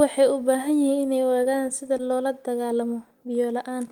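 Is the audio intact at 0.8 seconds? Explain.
Yes, the speech at 0.8 seconds plays through intact, with no dropout, click, distortion or other fault at that moment.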